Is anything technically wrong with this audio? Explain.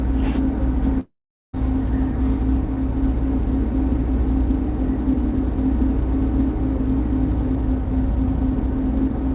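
Yes. From 1.0 to 1.55 s there's what sounds like a long network dropout: about 0.54 s of audio never arrived, so the receiver smeared the last sound into a fading buzz, then left about 0.42 s of silence before the sound picks up again with that chunk missing. A network gap is the likely cause. Around it, the band tops out at 4 kHz, which fits a G.711 call path.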